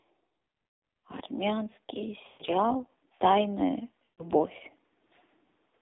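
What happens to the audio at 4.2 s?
Around 4.2 s the sound is hit by lost AMR speech frames, running from about 4.05 to 4.30 s. Corrupted frames were discarded, and the decoder filled the gap by repeating its last good pitch and vocal-tract settings at falling gain. The sound smears into a held, buzzy tone that sinks toward silence, then comes back thin and rough. About 140 ms is missing, which fits a run of seven 20 ms frames. Unlike a plain dropout, the gap is not abrupt digital silence. It is a synthetic continuation that fades out.

The concealment happens inside the AMR narrowband mobile codec, which applies to the whole clip. The line band runs from about 250 Hz to 3.7 kHz, so the sound has no low bass and no air above. The codec damage is heavy, with a buzzy, artificial texture that points to a low mode near 5.9 kbps. That coarse vocal-tract model is why the concealed stretch sounds like a frozen, fading buzz rather than a clean repeat of the earlier audio.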